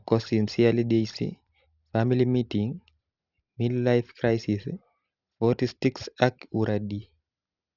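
Aliasing runs through the whole recording: the speech was downsampled without an anti-alias filter, which fits a drop from 48 kHz to 12 kHz. Content above 6 kHz folds back below it, adding gritty, metallic hiss to sibilants, roughly 20 dB under the speech.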